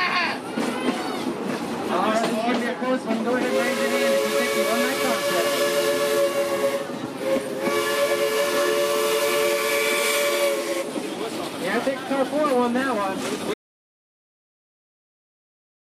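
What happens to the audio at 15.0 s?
At 15.0 s the clip is inside an audio dropout to silence that begins at 13.54 s and runs to the end of the file. The sound cuts off abruptly mid-flow and is replaced by silence: no room tone, no noise floor, nothing at all. The likely cause is a lost input, such as a disconnected device, a failed link or an accidental mute, while the recorder kept writing empty samples.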